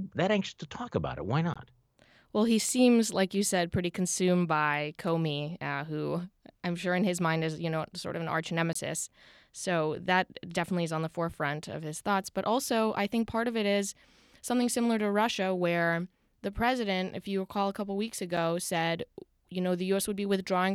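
A short gap of about 17 ms cuts into the speech at 1.54 s, a slightly longer dropout of about 23 ms follows "sort of an arch" at 8.73 to 8.75 s, and a brief 6 ms tick falls between "recall a couple weeks" and "said you know" at 18.37 s. Each is a block of digital silence. The audio cuts to silence and back with no fade, likely because the output buffer went unfilled in time. The 23 ms and 6 ms lengths fit 1024-sample and 256-sample buffers.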